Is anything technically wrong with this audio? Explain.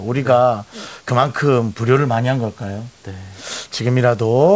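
No, nothing in this speech is technically at fault: the band stops at 8 kHz as expected from a wideband call path such as G.722, and the room noise sits about 40 dB below the speech.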